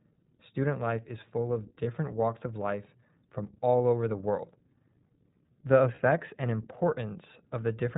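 It's a speech clip, and the whole thing has gone through the iLBC codec. Everything above 4 kHz is gone, and there's that slightly rough, synthetic edge you get from narrowband VoIP. The coding damage is plainly audible. The grain points to the 15.2 kbps mode with 20 ms frames, where each frame's excitation is coded on its own. There are also two short dropouts that sound like lost iLBC frames. The first comes at 1.84–1.87 s, right after "life is full of" and just before "walks of life from". The second is at 5.96–5.99 s. Each one sounds like a brief held, faintly buzzy vowel where the decoder repeats the last pitch cycle with some noise mixed in. The speech snaps back almost immediately because iLBC frames stand alone. Both gaps last about 20 ms, which fits a single lost frame each time.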